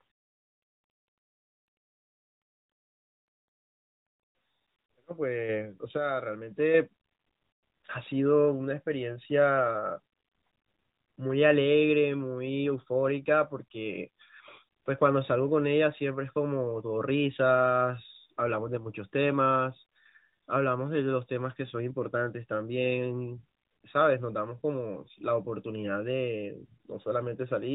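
At 5.49 s and again at 6.51 s the microphone volume is stepped up, by about 5 dB and then about 4 dB, as the call software raises the input level. Voice and background noise jump together, unlike a talker moving closer, where only the voice gets louder.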